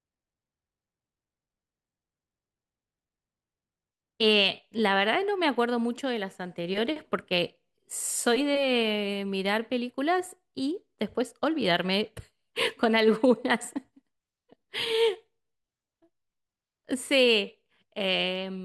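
Nothing goes wrong anywhere in this stretch of speech, so there's no technical fault to point out.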